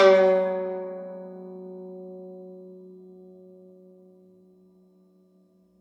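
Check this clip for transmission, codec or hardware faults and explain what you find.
Listening through the music, nothing stood out as a problem.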